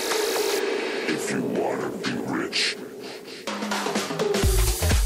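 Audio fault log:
throughout low bit depth without dither: signal-following grit about 30 dB down, likely from rounding to 7 bits; stair-stepped waveform, spectrogram hash that tracks the signal.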